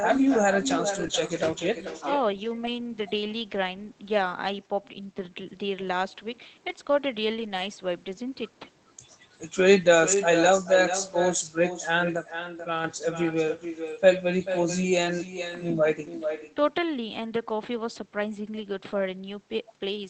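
Throughout the clip the speech is shadowed by echo with no canceller. A quieter, thinner copy of the talker returns roughly 0.4 s after the original, sitting about 9 dB below it. The far end is playing the call over a loudspeaker, its microphone is picking that up, and nothing is subtracting it before it comes back across the network. The result is a constant doubling behind every phrase.

From 0.95 to 1.05 s comes the first lost packet rebuilt from error correction. Three separate packets went missing, and the decoder played the low-bitrate redundant copies carried in the following packets instead. There is no gap, but the audio turns briefly rougher and noisier. Immediately after, from 1.07 to 1.11 s, a short concealed packet loss fills about 20 ms that never arrived. The decoder extended the preceding sound and then blended back into the real signal, which is heard as a brief smear.

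At 4.61 s the level drops abruptly by about 13 dB, speech and background together, with no fade, and it stays down until 5.46 s. This is a sudden gain jump, likely a digital gain setting applied in a single step without a ramp. A second, smaller drop of about 6 dB runs from 12.16 to 12.84 s.

Further packets rebuilt from error correction appear from 7.37 to 7.63 s, a longer run that points to several separate losses. Single-packet repairs follow at 8.27 s, at 10.15 to 10.17 s, at 12.63 to 12.65 s (inside the second level drop), and at 15.35 s. Each is a short patch of coarser, noisier sound rather than a dropout. Through the Opus call path the audio is band-limited at 8 kHz, which fits a bitrate around 24 kbps. That limit also means the rebuilt frames show no separate loss of top end.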